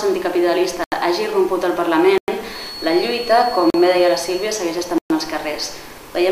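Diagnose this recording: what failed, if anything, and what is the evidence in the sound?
The failure is at the driver or buffer stage. The sound drops to blocks of digital silence four times: 0.84 to 0.92 s (80 ms), 2.18 to 2.28 s (about 100 ms), 3.70 to 3.74 s (40 ms), and 4.98 to 5.10 s (120 ms). Each gap starts and ends abruptly, with no fade. The output buffer was most likely not filled in time, so zeros were played instead of audio.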